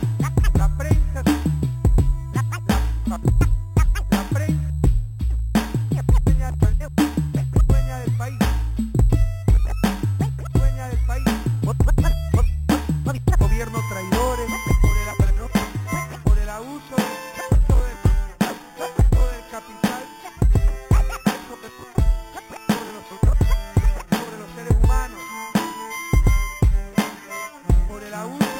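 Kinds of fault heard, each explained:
Imaging from sample-and-hold upsampling: The sound was raised to a higher rate by repeating each sample, with no smoothing filter afterwards. The pattern fits a jump from 8 kHz to 44.1 kHz. Mirror copies of the spectrum sit above the original band. The lowest copy fills about 4 kHz to 8 kHz, roughly 23 dB below the wanted sound. It is heard throughout as a bright metallic fizz that rises and falls with the sound.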